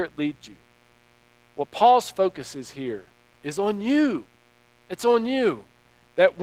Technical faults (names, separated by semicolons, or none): mains buzz; Opus voice compression